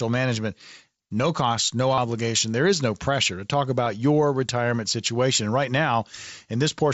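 At 1.95 to 1.98 s, right after "no cost no", a 30 ms run of concealed Bluetooth headset packet loss shows up as a short buzzy tone held at full level, with a slight warble as real speech resumes. A brief buzzy tone follows at 3.84 s, between "no pressure to talk" and "your retirement situation". Unlike a plain dropout, which would leave silence, the receiver filled the missing packets by repeating a matching stretch of recent waveform, all within the mSBC wideband band.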